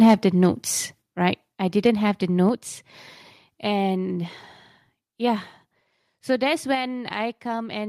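A speech clip with three sudden drops in level. At 1.02 s, the voice and background fall together by about 6 dB. At 2.49 s, they fall by about 4 dB. At 6.75 s, they fall by about 3 dB. Each drop is a single step, not a fade. The likely cause is the microphone volume being stepped down. Call software can lower the device's input gain when it judges the microphone too loud.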